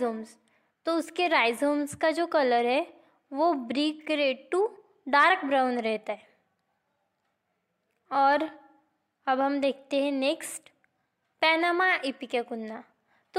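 Nothing technically wrong turns up anywhere in this audio, so there's no fault to point to or explain.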